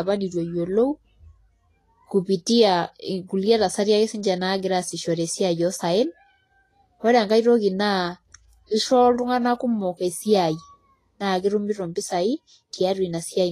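Speech, with audible lossy coding damage throughout. The treble sounds hissy and grainy, with nothing above 14.2 kHz. This is likely Vorbis compression at a low rate, fitting about 30 kbps.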